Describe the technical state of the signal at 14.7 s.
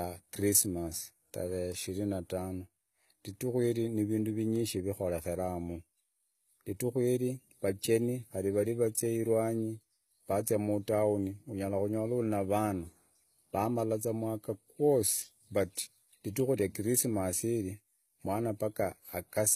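At 14.7 s the speech carries HE-AAC compression damage, present across the whole clip: the top ends near 14.9 kHz, and sibilants sound gritty and lispy. The likely cause is treble rebuilt by copying lower bands upward, fitting about 20 kbps, unlike a plain low-pass, which dulls instead.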